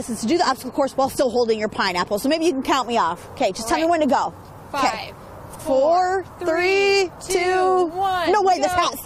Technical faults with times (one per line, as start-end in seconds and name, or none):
5.50-5.60 frames out of order